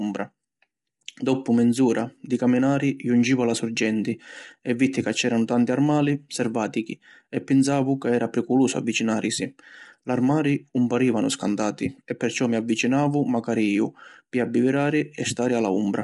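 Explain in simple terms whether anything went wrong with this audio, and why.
The speech was most likely squeezed through low-delay AAC compression, the kind used on video calls to keep delay short. It cuts the sound into very short slices and doesn't have enough data to describe each one well. The result, heard from start to finish, is a rough, grainy voice, with a hiss between the tones and no sound at all above about 11.6 kHz, so the sharpest, airiest parts of the speech are missing.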